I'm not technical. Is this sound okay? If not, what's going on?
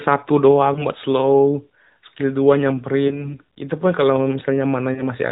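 No. A few pieces of the call signal were lost in transit, called lost AMR speech frames, and the phone filled each gap by briefly repeating and fading the previous sound. You hear short dips or wobbles at about 0.74–0.86, 3.08–3.37 and 4.94–5.03 seconds.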